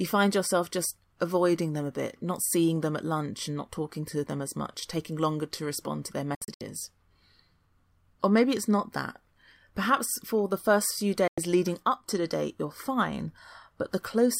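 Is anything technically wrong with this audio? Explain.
Yes. Two digital broadcast dropouts occur: the receiver lost valid frames and muted with a 3 ms fade. At 6.35 to 6.61 s, after "to respond to their", about 160 ms is lost in short holes of up to 64 ms. At 11.28 to 11.38 s, between "the first few" and "leading up to the", about 96 ms is silent.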